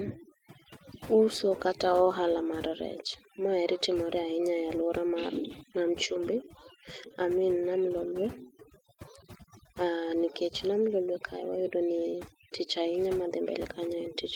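Overdone noise removal affects the whole recording. The suppressor was set too aggressively, so it pulls individual frequency bands far down or out whenever their level sits close to its noise estimate. The background drops, broken by twinkling specks where isolated bands flicker on and off. The quieter components of the speech are removed along with the noise.

Clock drift between sender and receiver also runs through the entire clip. The sender's audio clock runs roughly 2% slower than the receiver's, so samples arrive a little more slowly than they are played out. The jitter buffer therefore tends to drain, and the receiver has to compensate continuously rather than at a single point. This leaves small timing irregularities scattered throughout the clip.

Those compensations are audible as repeated timing corrections from 0.18 s to 13.81 s. To keep the buffer from running empty, the receiver repeatedly duplicates short pieces of audio, all in the stretching direction and at uneven intervals. 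The net effect is playback at about 98% speed, adding somewhere around a third of a second over that stretch. Each individual edit is small.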